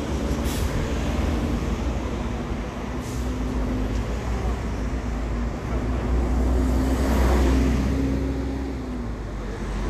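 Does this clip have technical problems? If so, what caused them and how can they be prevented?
Yes. Throughout, the audio is hissy and grainy with blurred attacks. A spectrogram shows a hard ceiling at 14.2 kHz and speckled, noisy upper bands. This is likely Vorbis compression at a low bitrate (consistent with around 36 kbps), which coarsely quantises fine treble detail into noise. Encoding at a higher Vorbis quality setting would prevent it.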